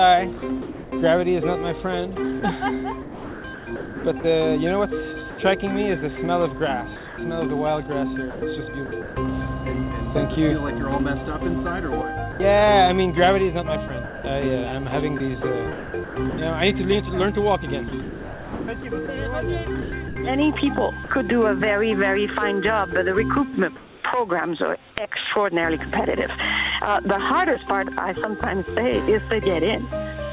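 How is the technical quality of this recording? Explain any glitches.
The recording has repeated voice-detector gating faults. Everything is band-limited to 4 kHz, which fits a G.711 mu-law call codec.

Sound chopped by the voice detector occurs at 0.38–0.92, 2.4–5.38, 6.96–9.16, 13.88–16.38 and 17.88–21.1 s. The sender's detector likely kept switching transmission off, so comfort noise replaced quiet parts. It sounds choppy. The waveform shows abrupt flat-noise patches and the spectrogram shows smooth, featureless fill.

Sound dropped by the voice detector occurs at 12.32–12.40 s, where 80 ms of sound is lost. The detector likely mistook it for background. It sounds like a brief gap of steady noise, visible as a short uniform band.

Comfort noise in place of the background appears at 23.76–24.04 s. Transmission likely paused and synthetic noise stood in, about 1 dB quieter than the background, which sits about 25 dB below loud passages. 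On a spectrogram it looks smooth and detail-free.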